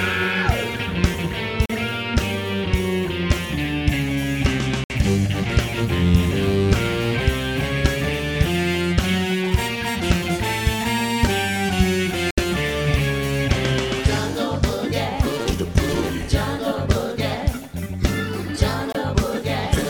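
At 1.66, 4.84, 12.31 and 18.92 s, blocks of digital silence (39, 60, 70 and 23 ms) cut the sound out, likely from buffer underruns; the last fits a 1024-sample buffer. Unlike a fade or a noisy dropout, each hole cuts out and back abruptly.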